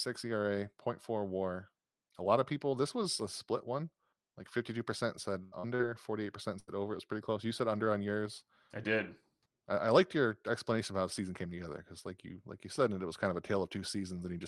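Right after "percent said", at 5.43 to 5.55 s, there's a burst of packet loss. Several packets in a row didn't arrive in time, so the receiver stretched the last bit of sound for roughly 85 ms while fading it down. When the speech comes back, about 80 ms of it is gone, so you hear a held, dying tail and then a small jump forward. The same thing happens again at 6.59 to 6.71 s, with about 81 ms filled and another 80 ms skipped.

Between those two, still just after "percent said", there are two short concealed packet losses, at 5.60 to 5.66 s and 5.75 to 5.82 s. Each time a few hundredths of a second never reached the decoder. The receiver patched the hole by carrying on the previous sound for about 35 and 40 ms, then blended back into the real audio, losing around 40 ms each time. They come across as quick smears or wobbles right on the heels of the first burst. All of this rides on an Opus call path, which cuts off everything above about 12 kHz.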